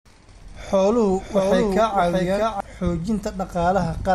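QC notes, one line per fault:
1.06–2.60 s, doubled audio track: a second capture path running late, or an edit leaving two copies out of step, is the likely cause. The speech is mixed in again roughly 0.7 s behind itself, about 5 dB quieter. The lagging copy is full-band with no decay or room colour, so it reads as a clean overlapping repeat rather than an echo. It cuts in and drops out abruptly at those two points.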